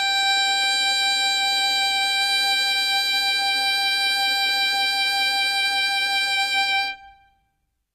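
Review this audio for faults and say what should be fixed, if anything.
HE-AAC compression damage runs through the whole music clip, and it is plainly audible. The treble sounds gritty and metallic. It is likely caused by spectral band replication. The codec keeps only the lower spectrum and fakes the top by copying lower bands upward under a coarse envelope. Those copied harmonics do not line up with the real ones. Nothing is present above 14.8 kHz. The degree of damage points to a very low bitrate, around 20 kbps. To prevent it, encode from the original source at a much higher bitrate, or use plain AAC or a lossless format.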